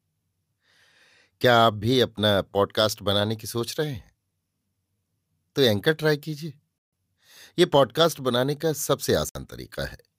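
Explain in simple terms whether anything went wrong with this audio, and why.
Bluetooth stall, at 6.78 to 6.93 s and again at 9.29 to 9.35 s: the speech drops to silence for about 145 ms, then 61 ms, before carrying on. Most likely, radio interference delayed the wireless data, the headphones ran out of stored sound, and playback paused until it arrived.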